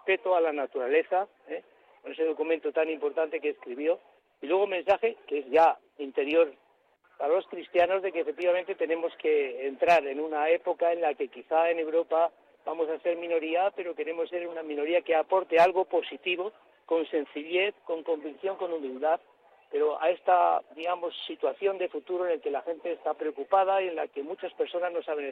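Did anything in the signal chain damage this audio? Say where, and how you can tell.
No, nothing in the signal chain damaged this audio.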